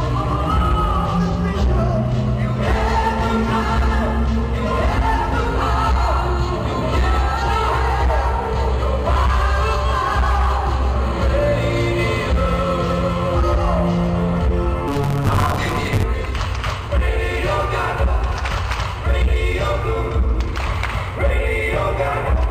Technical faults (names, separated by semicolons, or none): block size mismatch (truncated)